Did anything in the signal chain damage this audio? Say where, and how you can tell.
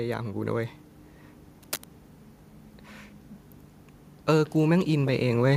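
Yes. From 1.63 to 1.86 s there is cable scratch noise in the analogue wiring: a dense, ragged burst of scratching and rustling about 10 dB below the speech, lasting a little over 0.2 s. The likely cause is a worn cable, connector or control being moved. Its contact resistance fluctuates rapidly, so the signal picks up irregular crackle rather than a clean click or steady hiss.

From 4.26 to 5.52 s the automatic gain is rising, a call-processing fault. Over roughly 1.3 s the level climbs by 7 dB, and the speech and background noise swell together. That shared ramp shows it is gain applied to the whole signal, not the talker getting louder. The AGC judged the input too quiet and raised its gain gradually, so the level changes audibly near the end.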